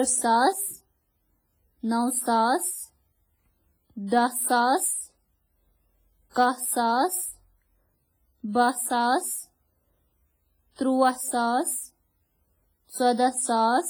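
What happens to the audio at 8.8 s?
At 8.8 s the speech carries WMA compression damage, present throughout: likely a transform codec at a low bitrate near 24 kbps, its spread quantisation noise giving ringing, washy, breathing hiss.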